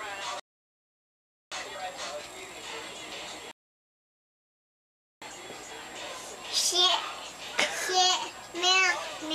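At 0.40 s the audio drops to silence and stays silent until 1.52 s, then picks up exactly where it stopped. The same happens again from 3.51 s to 5.22 s. Both are rebuffering stalls: playback ran out of downloaded data and halted until more arrived. No material is skipped or repeated. Instead, the gaps add roughly 1.1 s and 1.7 s of dead air, stretching the timeline.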